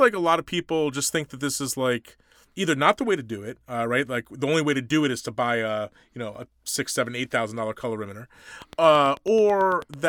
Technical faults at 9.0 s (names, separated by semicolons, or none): train of clicks